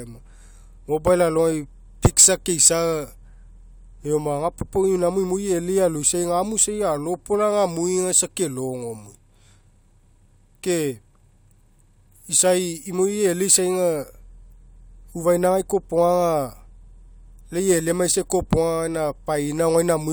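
No technical faults are audible anywhere in the recording.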